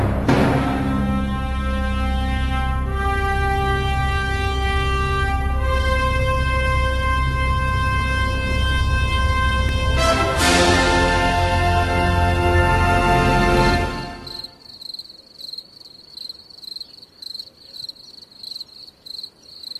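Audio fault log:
9.69 s and 18.11 s, repeated buffer: new audio showed up late both times, so the device played its last chunk again, about 2.67 ms, which fits a 128-sample buffer. It's so short you hear a quick click at each hard join, not a stutter.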